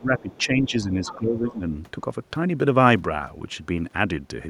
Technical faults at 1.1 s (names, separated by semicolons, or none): speech suppressed in double talk; other side's voice leaking through